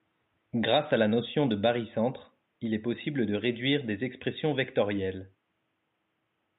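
The speech comes through with no technical faults, and the only other sound is the room's own background noise, about 50 dB below the speech.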